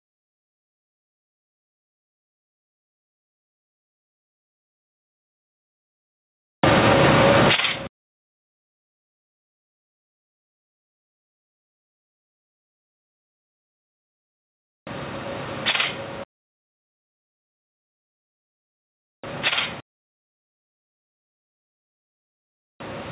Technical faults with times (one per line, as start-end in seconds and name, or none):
0.00-23.11 gain pumping